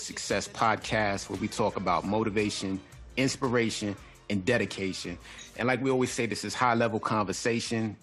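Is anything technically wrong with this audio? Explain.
No, no technical faults here.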